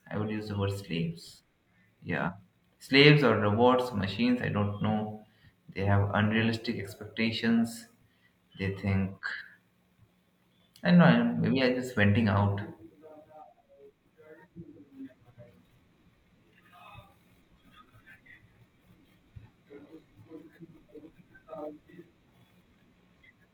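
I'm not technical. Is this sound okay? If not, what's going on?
No. At 2.24 s and again at 9.37 s the speech jumps ahead with a quick smeared blip, losing roughly a tenth of a second, then a bit more. These are compressed frames skipped: small chunks of the file were missing or damaged, so the player dropped them.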